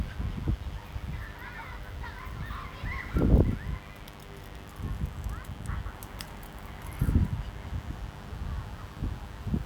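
A steady mains buzz runs from start to finish, sitting roughly 15 dB below the sound itself. Sharp switching spikes tied to the 50 Hz supply have leaked into the signal path, stacking harmonics into the kilohertz range and giving a constant, raspy edge.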